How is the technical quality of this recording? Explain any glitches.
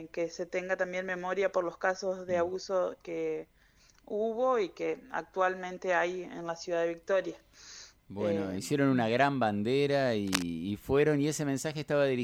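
One glitch stands out: cable scratch noise from 10.27 to 10.43 s, a brief burst of dense, irregular scratching, only a few dB below the sound. It's likely a worn connector being moved, its contact resistance jumping rapidly; a spectrogram shows a broadband smear, the waveform jagged spikes.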